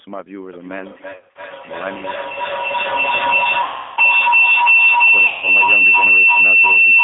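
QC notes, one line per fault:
throughout: G.729 codec. The sound is band-limited to roughly 250 Hz–3.6 kHz, slightly rough and synthetic, which fits an 8 kbit/s pulse-coded speech model.
0.53–7.04 s: feedback howl. A tone around 3 kHz swells to about 14 dB above the speech, with a loop delay of roughly 300 ms. Microphone-to-loudspeaker loop gain exceeds unity and never breaks.
1.12–1.41 s, 3.62–4.00 s, 5.27–5.44 s: VoIP packet loss concealed by the speech codec. Buzzy or noisy, fading smears over about 200 ms of losses scattered in runs up to 60 ms, then gaps of about 350 ms and 150 ms, as the decoder extrapolates its last pitch and filter.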